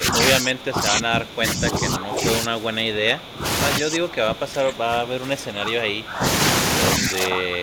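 Speech with speech suppressed in double talk: the level drops by about 15 dB from 0.0 to 0.15 s and by about 20 dB over 0.36–3.45 s, 3.79–6.24 s and 6.98–7.62 s, likely an echo canceller turning down the near talker while the far side spoke.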